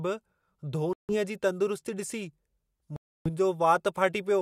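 Bluetooth stalls at 0.93 to 1.15 s and 2.96 to 3.30 s interrupt this speech clip, cutting the sound to silence for about 157 ms and then 292 ms before it resumes. The likely cause is radio interference delaying packets on the wireless link, so the headphones' buffer emptied and playback halted until the retransmitted audio arrived, after which the speech continued.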